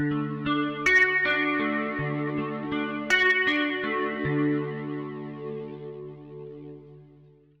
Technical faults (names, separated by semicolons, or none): none